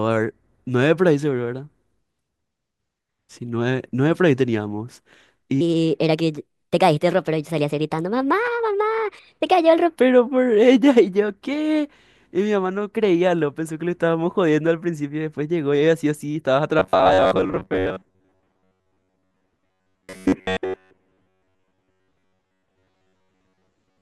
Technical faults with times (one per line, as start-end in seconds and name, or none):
5.61-9.96 section at the wrong speed
16.79-24.01 robotic sound from repeated short buffers